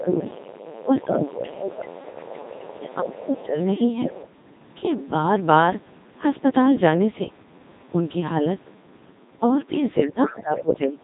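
From the first moment to the end at about 11 s, the speech carries the robotic, buzzy timbre of the Codec 2 vocoder at 2.4 kbit/s, and the damage is heavy. Only pitch, voicing, energy and a coarse spectral envelope survive; the decoder rebuilds everything from sine waves. On a spectrogram the harmonics form unnaturally regular stripes under a smeared envelope, with breathy and fricative texture largely missing, and the waveform looks synthetic rather than recorded.

From 0 to 3.66 s a second, fainter voice runs under the talker, roughly 15 dB down. This is other side's voice leaking through, most likely loudspeaker playback that the echo canceller did not fully remove from the microphone.

Within that stretch the main voice sinks by something like 15 dB at 0 to 0.43 s, 0.8 to 1.66 s and 2.77 to 3.58 s. This is speech suppressed in double talk, likely because while both voices overlap, the canceller cannot tell its own talker from the echo and attenuates both. 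The waveform envelope shows clear dips in those windows.

The leak returns briefly at 10.54 to 10.77 s, louder this time at about 10 dB below the speech. It appears as a short burst of stray harmonic energy beside the main voice.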